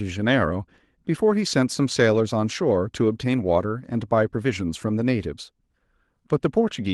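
A recording of speech with no technical faults to report. It has gone through a WebRTC call path, and the top end stops at about 12 kHz with the coding texture typical of a call codec such as Opus at a moderate bitrate.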